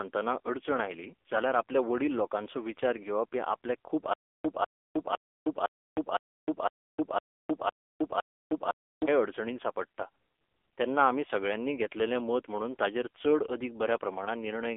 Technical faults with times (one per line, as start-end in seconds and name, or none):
0.00-14.77 AMR narrowband mobile codec
4.13-9.08 stutter with silent gaps